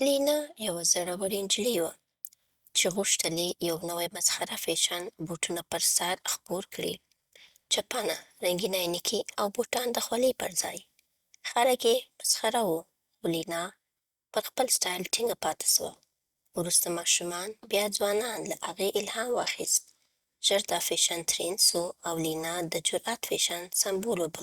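Nothing stood out as a technical problem on listening to this speech recording.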